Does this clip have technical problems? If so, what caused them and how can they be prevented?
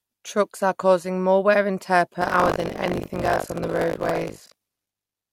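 Yes: buffer tearing from 2.2 s to the end, a 50 Hz rattle present only with signal. Unlike mains hum, it is absent in silence. Each roughly 20 ms period replays about a third of its audio from roughly 70 ms earlier, with hard joins on both sides, because the writer and reader of the ring buffer have slipped into each other. To prevent it, keep the write position a safe margin ahead of the hardware read pointer and resynchronise after any underrun.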